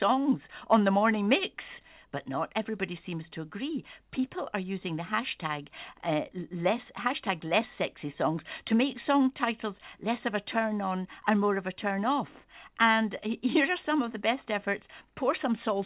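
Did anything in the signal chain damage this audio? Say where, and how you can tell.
No, nothing in the chain has damaged this speech; it came over a call path using G.711 mu-law at 64 kbps, so there's simply nothing above 4 kHz, which is just that narrowband codec doing its normal job.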